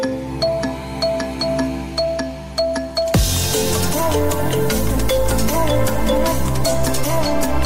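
No technical faults can be heard anywhere in the signal, which stays steady and intact throughout.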